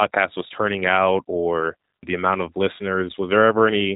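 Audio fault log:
throughout, G.729 codec: the speech sounds plainly coded, dull with no content above 4 kHz, and rough, buzzy and slightly synthetic, which fits an 8 kbit/s G.729 coder. Rather than carrying the waveform itself, this codec rebuilds each 10 ms frame from a vocal tract filter, a pitch predictor and a sparse set of excitation pulses, so the fine detail between those pulses is lost and replaced by an approximate, mechanical-sounding texture.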